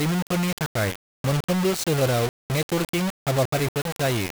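Throughout, the speech was likely rounded to low bit depth without dither, fitting about 3 bits, so gritty distortion tracks it, about 10 dB down.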